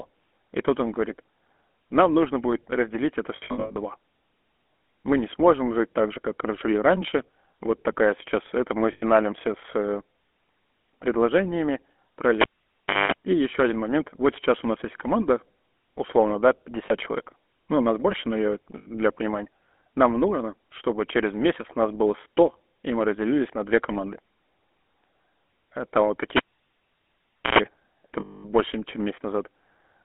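Throughout, the speech carries the buzzy, gravelly roughness of the GSM full-rate codec, consistent with 13 kbps, band-limited to 250 Hz to 3.4 kHz with plainly audible codec damage.

After "нужно будет разделить это", from 3.36 to 3.78 s, lost GSM frames scattered over 0.4 s, with the longest run around a tenth of a second, are filled by repeating the last good frame, giving a metallic ring. Shorter instances follow at 8.92 to 9.03 s, between "такая сейчас это мы" and "с э", at 16.86 to 16.91 s after "есть команда условно да", and at 18.78 to 18.87 s.

At 12.41 to 13.12 s, a cable pulled and plugged in gives a pop, about 0.66 s of near silence, 0.21 s of 50 Hz mains buzz, and a second pop.

At 26.37 to 27.59 s it happens again, with about 1.17 s of near silence and 0.11 s of 60 Hz buzz.

At 28.20 to 28.45 s, a longer run of lost frames rings.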